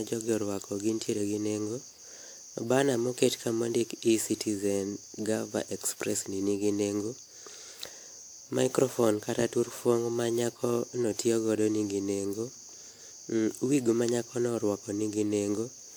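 Right through the speech there's generation loss: a swirly, hollow smear with softened consonant attacks, and nothing above 20.1 kHz. It's likely from being re-encoded around seven times, with the artefacts pointing to a WMA-style codec at roughly 128 kbit/s, each pass stacking up new quantisation noise.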